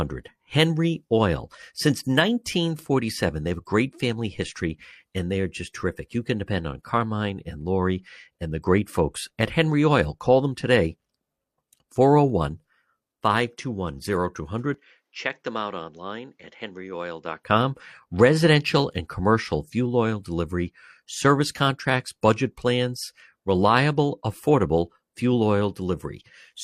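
At 14.74 s the speech suddenly goes duller and drops by roughly 10 dB, with nothing above 7.6 kHz and a faint new noise sitting roughly 50 dB under it. There's no gap at the change, just an abrupt shift in tone. That's most likely the input switched to a poorer device, a narrower-band device with its own noise, and at 17.43 s the full, brighter sound comes back.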